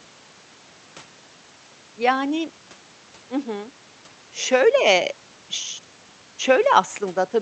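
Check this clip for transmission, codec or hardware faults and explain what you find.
Nothing stood out on listening to the speech, which came over a call link.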